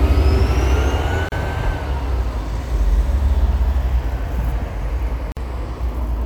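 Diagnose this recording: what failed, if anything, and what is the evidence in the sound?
The failure is at the codec stage: a gap at a join of encoded pieces. Continuous sound drops to silence from 1.29 to 1.32 s, about 33 ms, and again from 5.32 to 5.37 s, about 49 ms. The gaps recur every 4 s. Each has edges smeared by the codec. The sound then resumes where it stopped. Separately encoded pieces were joined untrimmed. The encoder's start-up delay and last-frame padding stayed in as silence.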